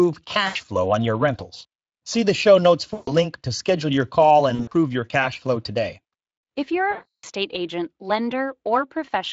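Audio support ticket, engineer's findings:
VoIP packet loss concealed by the speech codec: decoder extrapolating from last pitch and filter across missing packets, gain stepped down frame by frame. Heard at 0.47–0.56 s (80 ms lost), 2.93–3.13 s (140 ms), 4.55–4.73 s (120 ms scattered across 160 ms, longest gap 60 ms) and 6.91–7.25 s (320 ms). Speech smears into a buzzy tone or coloured noise that fades, with weak recovery after each gap. The step pattern fits 20 ms Speex frames. Light Speex coding damage throughout.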